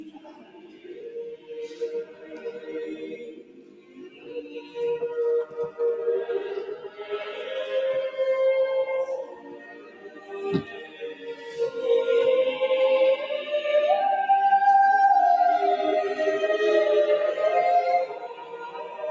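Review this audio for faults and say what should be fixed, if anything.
A noise suppressor applied to music or sounds runs throughout, pumping the level by roughly 15 dB as it treats sustained material as noise. Attacks pass while tails sink.

Sound cut by the noise suppressor at 0.00–1.12, 1.37–1.81, 2.04–2.70, 3.02–4.76, 6.77–7.03, 9.25–10.38, 10.62–11.59 and 18.06–19.11 s drops about 9–14 dB, with decays cut short.

Switch off speech-oriented noise suppression, or use a music mode, whenever the input is anything other than speech.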